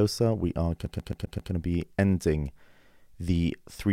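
A CD stuck on one turn throws the laser back each rotation, so from 0.86 to 1.52 s a 132 ms slice of speech stutters five times.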